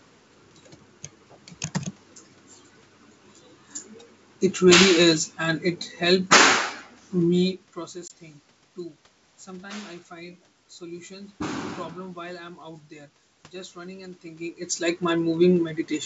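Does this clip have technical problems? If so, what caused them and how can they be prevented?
Yes. Packet loss on an ADPCM call at 8.08 to 8.12 s: a couple of packets, about 20 ms of audio, become hard-edged silence. The decoder's predictor and step size then drift from the sender's, so the speech returns slightly distorted before settling. A jitter buffer with packet loss concealment and decoder state resynchronisation after gaps would prevent it.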